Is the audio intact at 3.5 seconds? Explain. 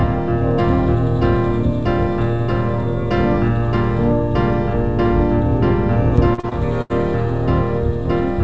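Yes, the audio is intact at 3.5 seconds, with nothing there beyond the ordinary coding of the call path.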